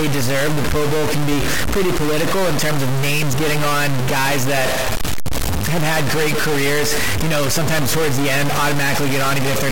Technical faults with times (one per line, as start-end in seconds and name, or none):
0.00-9.72 stuck bit